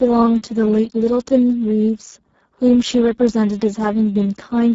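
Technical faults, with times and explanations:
throughout: Speex codec, heavy damage. The speech sounds hoarse and noisy because the CELP coder has too few bits for the excitation, which fits a bitrate near 6 kbps. A spectrogram shows smeared, noise-filled harmonics and nothing above 7.7 kHz.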